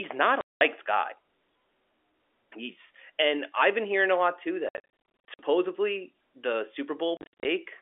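Packet loss filled with silence cuts this narrowband telephone speech three times. At 0.41 s, after "not a", a solid 200 ms hole opens. From 4.69 to 5.39 s, after "hearing a lot too", 410 ms vanishes in gaps of up to 60 ms. From 7.17 to 7.45 s, 210 ms drops out the same way. The hard edges and gap lengths in 10 ms steps, which fits 10 ms packets, mark lost packets replaced by dead silence rather than smoothed over.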